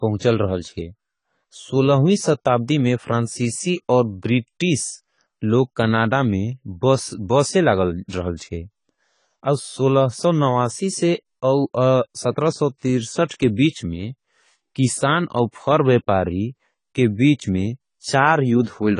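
Throughout, the speech has likely passed through AAC compression, with damage that fits AAC-LC at around 24 kbps. The encoder discards everything above 10 kHz and quantises coarsely, leaving the speech dull and smeared, with plainly audible warbling, fizzy texture on sibilants.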